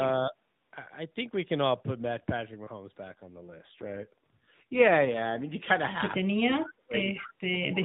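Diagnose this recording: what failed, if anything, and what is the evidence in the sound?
Speech suppressed in double talk, call processing, at 0.30–0.34 s, 6.28–6.95 s and 7.2 s to the end: the speech dips by about 10 dB, then by about 30 to 35 dB. This is likely the echo canceller muting both talkers when it couldn't separate them.

AMR rate drop, codec and network, from 3.06 to 5.43 s: the narrowband speech keeps its 4 kHz band without gaps but turns buzzier and more synthetic as the rate falls from 12.2 to 5.9 kbps, trading bits for error protection on a weak link.

Echo leak, call processing, at 7.13–7.32 s: a copy of the speech returns 206 ms late, about 15 dB below it. The likely cause is a loudspeaker on one side whose echo canceller let part of the microphone pickup through and back into the call.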